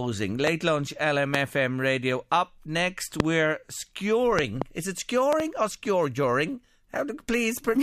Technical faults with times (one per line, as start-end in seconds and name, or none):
0.47-0.49 loud pop
1.34-1.37 loud pop
3.20-3.22 loud pop
4.39-4.64 loud pop
5.33-5.42 loud pop